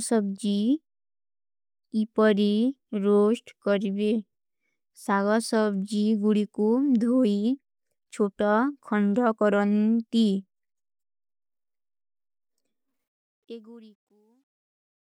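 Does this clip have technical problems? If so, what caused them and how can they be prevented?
Yes. Truncation distortion on a fade runs from 12.88 to 15.03 s, worst from 13.96 s to the end. The fade-out keeps too few bits, which fits about 12-bit processing without dither, so its quiet tail turns gritty. Process fades at higher bit depth and add dither before reducing word length.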